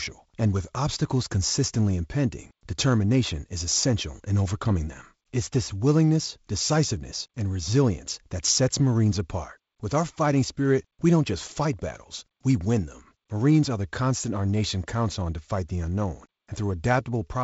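The speech has no technical faults: its bandwidth stops at about 7.7 kHz, with a light hiss in the upper band and slightly noisier low frequencies, which fits G.722 wideband telephone coding running at a reduced rate such as 48 kbit/s.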